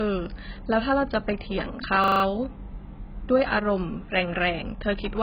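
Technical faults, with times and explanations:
Throughout: AAC compression. The encoder was likely AAC-LC starved of bits, a very low bitrate of about 12 kbps. To stay within that budget it discarded everything above 5.2 kHz and coarsely quantised what remained. The speech therefore sounds dull and muffled, with sibilants losing their edge. The heavy quantisation also smears detail across each frame and leaves gaps in the spectrum, giving sustained sounds a watery, warbling texture.
2.04–2.24 s: system hang loop. The system froze while the audio hardware kept replaying the same 40 ms ring buffer. That one fragment repeats exactly, five times in a row, at 25 Hz. Instead of the speech moving on, you hear a rapid mechanical stutter, close to a rough buzz, for 0.2 s. When playback resumes, little or no audio appears to be missing, so the speech picks up where the stuck fragment ended.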